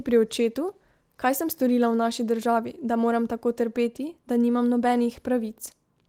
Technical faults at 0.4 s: none

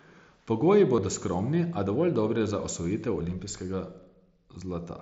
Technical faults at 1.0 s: concealed Bluetooth headset packet loss

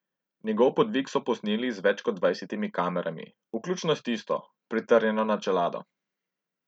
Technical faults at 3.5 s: none

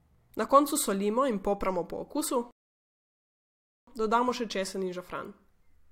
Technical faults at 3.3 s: rebuffering stall

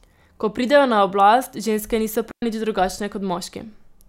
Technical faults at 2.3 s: digital wireless dropout

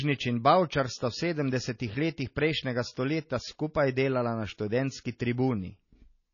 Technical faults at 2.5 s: MP3 compression

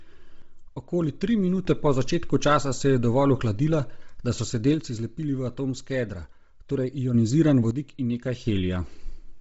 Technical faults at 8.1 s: Bluetooth LC3 compression; one channel drops out

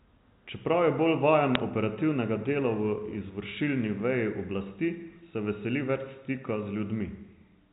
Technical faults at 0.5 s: none

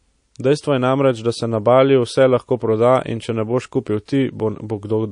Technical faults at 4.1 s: MP3 compression; pre-echo

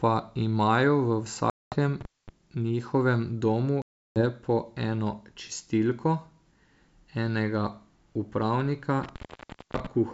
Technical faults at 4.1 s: packet loss on an ADPCM call

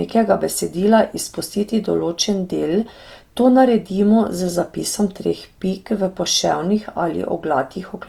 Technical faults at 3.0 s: Opus compression

